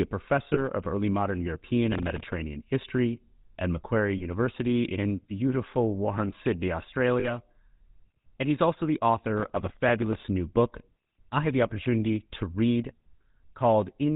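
From the start the whole thing runs through the GSM full-rate codec, and it's plainly audible. Nothing gets through above 4 kHz, and the coarse pulse-driven excitation gives the speech that buzzy, gravelly grit. The roughly 13 kbps rate fits the original GSM coder.

Then there are lost GSM frames at 0.54–0.59 s, 4.18–4.24 s and 7.2–7.31 s. Each time the decoder keeps repeating the last good frame, so you hear a brief metallic ring. The first two sound like a single 20 ms frame each, and the third sounds like two in a row.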